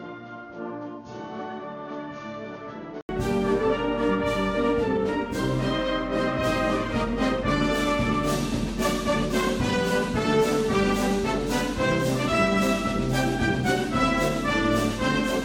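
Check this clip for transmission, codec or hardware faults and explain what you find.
One fault is present at the start. From 0.0 to 3.09 s the sound is dull and boxy, with nothing above 6.7 kHz. It is also roughly 10 dB quieter and carries faint background noise of its own. At 3.09 s there is a short gap of about 80 ms. After that the full band and level return. The likely cause is an input switched to a poorer device, a narrower-band microphone or headset profile, before the system moved back to the main input.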